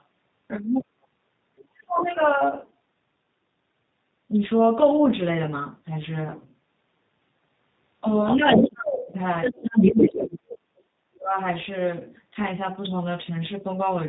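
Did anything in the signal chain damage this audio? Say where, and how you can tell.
Yes. At the codec stage, G.729 coding at 8 kbit/s is plainly audible throughout. The speech has nothing above 4 kHz and a rough, buzzy, synthetic texture from the pulse-based excitation. That texture is what separates it from a simple low-pass filter, which would only dull the sound.

In call processing, the other side's voice is leaking through at 0.81–0.85, 1.57–2.23, 8.26–8.69 and 9.42–10.17 s. It starts faint, well below the talker, and by 9.42 s it is as loud or louder. This is likely residual loudspeaker echo that the canceller failed to remove, not crosstalk in the wiring.

Also in call processing, the talker's speech is suppressed in double talk at 0.86–1.08, 1.67–2.11, 8.35–9.2 and 9.93–11.36 s. The level drops by around 30 to 35 dB, each time right after or overlapping the leaked voice. That overlap points to the echo canceller, which likely ducked both voices together, rather than to network dropouts.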